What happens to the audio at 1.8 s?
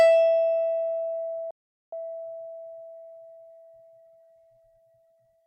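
At 1.8 s the music has dropped out into silence: it cuts off mid-flow at 1.51 s and stays silent for about 0.42 s, resuming at 1.93 s. This is a playback stall, likely from the player running out of buffered data or its output thread being blocked.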